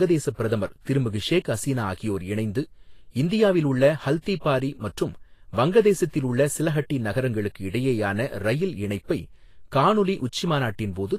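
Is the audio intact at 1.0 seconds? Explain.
No. Vorbis compression runs through the whole clip. Nothing sounds above 14.2 kHz, and the treble is hissy and grainy, likely from coarse quantisation at a bitrate of about 33 kbps.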